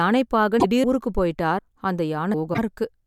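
Speech, with damaged data in a compressed stream at 0.56 to 0.65 s and again at 2.50 to 2.59 s: each time the decoder misreads corrupted frames and loses sync. Audio missing between chunks shows up as abrupt skips at 0.84, 1.59 and 2.34 s, where the sound jumps forward with no gap. The likely cause is a recorder handing over roughly one-second chunks and dropping around a third of a second at each join.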